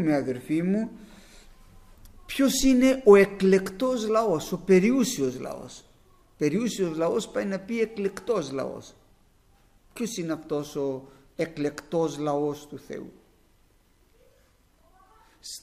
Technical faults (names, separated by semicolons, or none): none